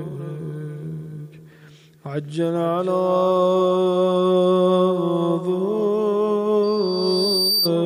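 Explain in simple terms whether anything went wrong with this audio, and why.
A microphone was picking up the loudspeaker it was feeding, so sound went round and round the loop, and at one pitch each trip came back stronger than the last. The result is loudspeaker feedback squeal: from 6.63 s a thin, high whistle near 4.6 kHz swells up over about a second until it is roughly as loud as the rest of the sound, then stops at 7.71 s.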